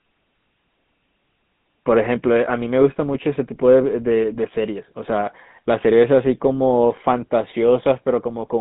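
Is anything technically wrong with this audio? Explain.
Yes. For the whole length of the speech, the audio has been carried through the GSM full-rate codec, with a sound that fits that codec's 13 kbps rate. The codec reduces the vocal tract to a filter and excites it with a regular pulse train, keeping only one excitation sample in three, so fine detail between pulses is discarded. The result is a plainly audible buzzy, gravelly roughness, confined to a narrow band from 150 Hz to 3.7 kHz.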